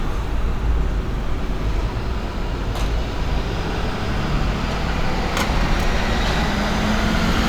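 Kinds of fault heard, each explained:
No faults are present: the signal shows no dropouts, clipping, distortion, noise bursts or timing irregularities anywhere in the audio.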